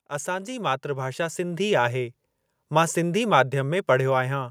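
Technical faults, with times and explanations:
0.24 to 2.21 s, automatic gain rising: the gain control judged the input too quiet and raised its level gradually by about 9 dB, so speech and background noise swell together. On a waveform the envelope widens steadily; a spectrogram brightens across all frequencies, noise floor included.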